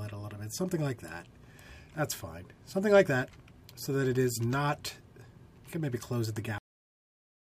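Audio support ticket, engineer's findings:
Cut-off end at 6.58 s. Sound stops mid-event, straight to digital silence for the remaining 1 s. Probable component: capture or playback buffer handling. Final buffers never written or flushed. Unlike a fade-out or noise gate, there is no decay or release tail, just an instant drop.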